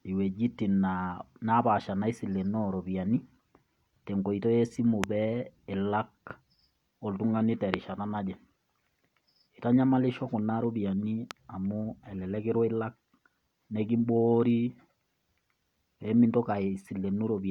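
At 5.04 s, 7.74 s after "oltung'ani te" and 11.31 s between "kuna rupiani" and "amu elelek kirwa ilak", a single loud pop, about 20, 25 and 15 dB above the speech, sits on top of it. The likely cause is a voltage pulse from a switch or static. Each appears as a tall waveform spike and a thin vertical spectrogram stripe.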